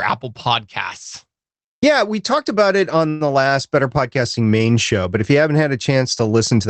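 Speech carried over a call link, band-limited to about 8 kHz in a way that fits a low-bitrate Opus stream, has a call audio freeze from 3.09 to 3.28 s, just after "talked about it on": a fading buzz or hiss fill of about 111 ms, then speech resumes without loss, likely from delayed packets draining the jitter buffer.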